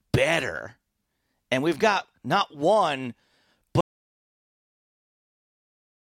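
A short piece of speech that runs fine until about 3.81 s, then hits an audio dropout to silence that lasts right through to the end, a little over 2.3 s of nothing. The cut is abrupt, mid-flow, and what's left is silence with no room tone underneath, so the recorder kept writing silence after the input went away. That pattern points to a likely lost input, such as a disconnected device, a failed link or an accidental mute, and whatever came after is simply gone.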